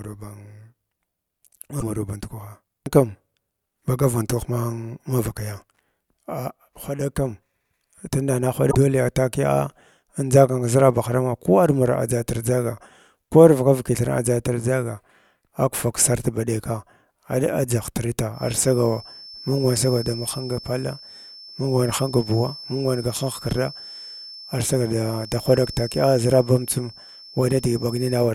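A speech recording with two brief blips, one at 1.77 to 1.83 s just before "maraw band" and one at 8.68 to 8.75 s right after "tunda na". These come from damaged data in a compressed stream: corrupted bytes make the decoder misread those frames, lose sync and jump ahead to the next valid frame header. From 18.3 s to the end, a thin, steady 5.3 kHz whistle sits roughly 20 dB under the speech, swelling and fading slowly in level. This is likely a feedback whistle, with the loudspeaker-to-microphone loop held just at the edge of feedback so that one frequency rings without building up.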